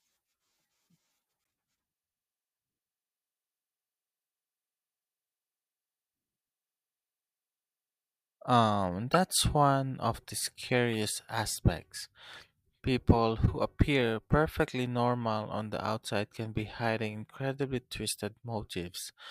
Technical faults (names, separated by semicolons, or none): corrupt frame decoded